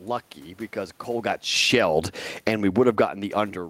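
From 1.08 s, just after "lucky because", automatic gain falling sets in. The control has judged the input too loud, or its background noise too strong, and pulls its gain down by about 16 dB until 3.02 s. Speech and room noise sink together, which sets it apart from the talker's own movement around 1 s, where only the voice changes. Within that fall, automatic gain rising briefly lifts level by about 8 dB between 1.81 and 2.32 s. It happens again from 2.93 to 3.58 s, with about 10 dB after the input dropped about 24 dB as the talker moved near 3 s. Both times the background swells along with the voice over half a second or more, so it is the gain at work and not a change at the microphone.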